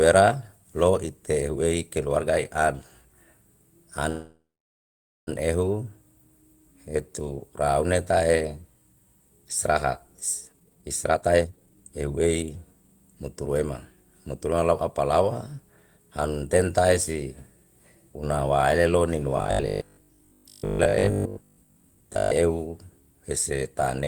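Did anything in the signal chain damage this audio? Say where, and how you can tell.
Yes. At the network stage, a call audio freeze runs from 4.09 to 5.29 s: the last sound is held as a fading buzz that goes silent for about 0.86 s, likely because packets stalled and the jitter buffer emptied. Unlike a dropout, the speech resumes exactly where it stopped, with nothing lost.

In the jitter buffer, a speed-up runs from 10.49 to 12.54 s. The speech plays at 157% speed at unchanged pitch, because the receiver is trimming tiny pitch-period slices, roughly a second in total, to shed excess delay. The steady pitch rules out a sample-rate mismatch.

At the driver or buffer stage, robotic sound from repeated short buffers runs from 19.37 to 22.31 s. A rigid, metallic 50 Hz buzz follows the speech loosely. That fits a 20 ms chunk being replayed for roughly two-thirds of the time, likely because fresh audio arrived too seldom. 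Codec artefacts would not impose a fixed pitch like this.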